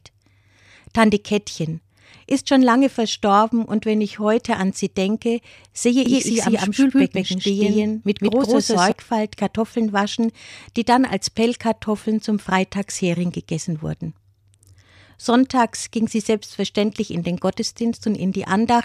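A speech recording with a doubled audio track between 6.06 and 8.92 s. Over that stretch, a second full-band copy of the speech runs a fixed gap of roughly 150 ms behind the first, at about the same level. It carries no reverberant tail or room colouring and cuts in and out abruptly at both ends. The likely cause is the signal being picked up again through a slower parallel path, or an edit that left two misaligned copies stacked.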